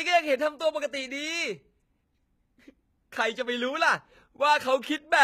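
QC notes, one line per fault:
Throughout, HE-AAC compression: the s sounds come out gritty and lispy, and the top end has a bright, metallic sheen. That's likely HE-AAC rebuilding the treble from copied lower bands, which fits a very low bitrate around 20 kbps.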